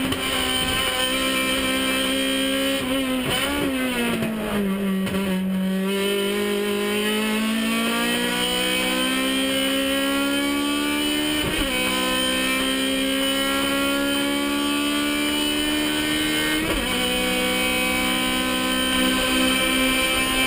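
From 18.93 s to the end, a doubled audio track: a full-band copy roughly 0.7 s late and about 5 dB quieter, likely from a second capture path. It cuts in abruptly, with no echo-like decay or room colour.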